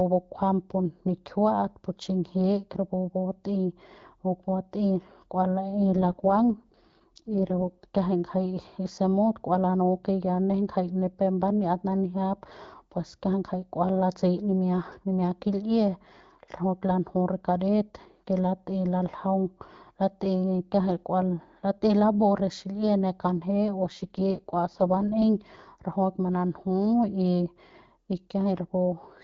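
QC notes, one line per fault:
5.72–7.86 s and 23.79–25.24 s, AMR rate drop: twice the speech goes rougher and more synthetic, then snaps back. The bandwidth stays put and nothing drops out, so it's the AMR-WB codec stepping down to a leaner mode with fewer bits for the voice. That fits a drop from the 12.65 kbit/s HD Voice rate, which sounds clear elsewhere, to around 6.6 kbit/s while the link was weak.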